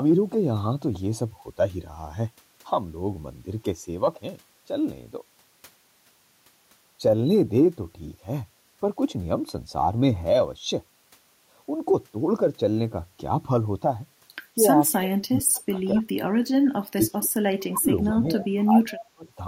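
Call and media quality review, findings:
Echo leak, 14.81–14.97 s, 15.55–15.59 s, 18.98–19.05 s: faint delayed copy of the far talker, 232 ms behind, weak at first, up to roughly 15 dB under the speech by the end. Likely the far end's loudspeaker echo canceller letting residual through.

Speech suppressed in double talk, 14.94–15.76 s, 15.93–16.05 s, 16.81–17.32 s, 17.7–17.89 s, 18.14–19.26 s: the talker ducks in chunks while both sides overlap, dropping by as much as about 30 dB. Likely the canceller couldn't separate near speech from echo and squashed both.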